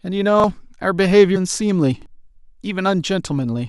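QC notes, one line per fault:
0.40 to 0.44 s and 2.02 to 2.06 s, repeated buffer: a 40 ms piece of speech plays twice with hard joins, a brief stutter rather than a chirp, and about 40 ms of speech is lost each time.
1.35 to 1.37 s, damaged data in a compressed stream: corrupt frames make the decoder lose sync, giving a brief glitch, not a clean exact repeat of earlier sound.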